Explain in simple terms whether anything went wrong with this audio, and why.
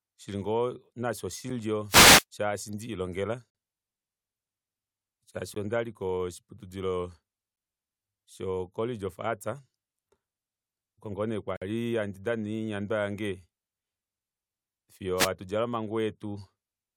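Yes, two things went wrong. First, there are gaps between stream segments: brief holes of pure silence at 1.50, 3.50–3.55, 5.54–5.56, 7.56–7.57 and 11.57–11.62 seconds, lasting roughly 6 to 50 milliseconds. They land near two-second steps because the audio arrives in two-second pieces that don't quite meet, and the player fills each gap with silence. Nothing is lost, and unlike interference, these holes are clean and sharp-edged.

Second, there are wireless microphone noise hits at 1.88–2.24 and 15.16–15.29 seconds: short swishes of static over the speech. The radio signal from the microphone briefly faded, so the receiver's own hiss rose. The difference from the gaps is that these add noise rather than cutting to silence.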